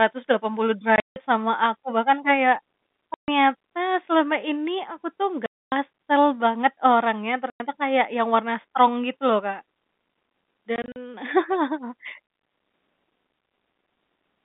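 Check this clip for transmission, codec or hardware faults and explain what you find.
Packet loss filled with silence is what stands out, at five spots: 0.96 to 1.16 s, 3.14 to 3.28 s, 5.46 to 5.72 s, 7.5 to 7.6 s and 10.76 to 10.96 s. The speech just cuts out and snaps back, with hard edges. Missing packets were swapped for dead silence, and every hole is a multiple of 20 ms, which fits 20 ms packets. The first and last are scattered over 200 ms rather than one solid hole: the first is mostly a single 160 ms gap, and the last is short gaps of up to 40 ms. Underneath, it's a G.711 telephone line, band-limited to roughly 200 Hz to 3.7 kHz.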